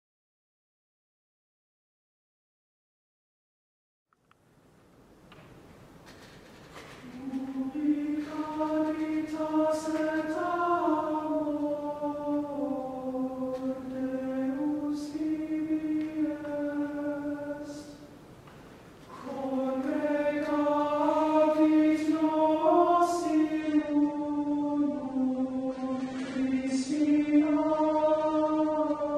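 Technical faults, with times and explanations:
23.61 to 29.17 s, adaptive stream at a lower bitrate: the quality falls suddenly and stays low to the end, with no gap in playback. The stream has switched to a cheaper encoding, most likely because the connection slowed, and the sound points to AAC dropping from about 96 to 32 kbit/s. With so few bits the encoder discards the top octave, so nothing is heard above 9.7 kHz, and coding artefacts rise, leaving the audio dull and grainy.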